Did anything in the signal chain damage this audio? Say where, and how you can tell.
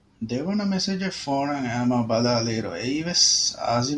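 No, nothing along the chain has left a mark on this speech recording that I can hear.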